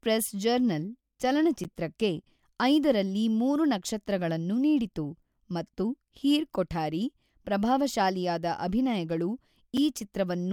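A block of digital silence at 1.64 s, roughly 11 ms long (which fits a 512-sample buffer left unfilled), and again at 9.77 s, about 5 ms, right after "ಹೀರ್ ಕೊಠಾರಿ ಪ್ರಭಾವಶಾಲಿಯಾದ ಅಭಿನಯಗಳು". Each is heard as a tick or dip as the speech cuts out abruptly and back.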